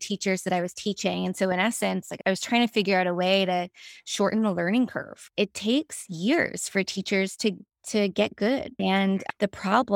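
No technical faults are audible anywhere in the clip; the speech runs without dropouts, clicks, distortion or interruptions of any kind.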